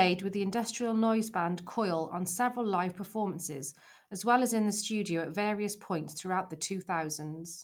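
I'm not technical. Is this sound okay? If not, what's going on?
Yes, this one sounds fine. The speech comes through steadily, without any dropouts, clicks or sudden changes along the way.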